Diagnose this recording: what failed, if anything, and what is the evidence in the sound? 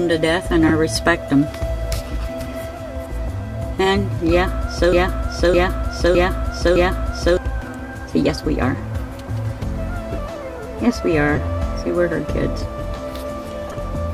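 The codec stage decoded corrupted frames: flipped bits in a handful of compressed frames were played anyway, scattering energy into wrong frequencies. Short chirps and noise blips result, each lasting one to a few frames, at 0.67–0.72 s, 3.84–3.86 s, 9.59 s, 11.35–11.38 s and 13.67–13.74 s.

Playback or the stream likely stalled and kept replaying its last held fragment, a broken-record loop. From 4.93 to 7.37 s a 611 ms piece repeats exactly, back to back, four times, and the audio that belonged in that stretch never arrives.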